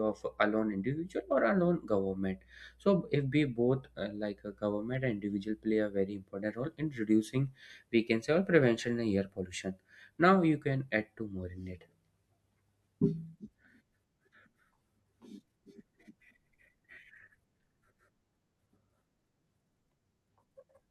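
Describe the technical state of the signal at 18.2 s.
At 18.2 s the speech signal is intact, with no audible technical fault at that moment.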